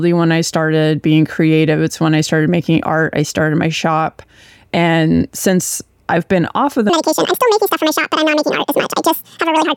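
Speech clip in which the final section, from 6.89 s to the end at 9.77 s, is a section at the wrong speed, likely because it was played back against the wrong clock. It runs 1.94 times too fast, so the audio turns hurried and jumps up about ten semitones in pitch.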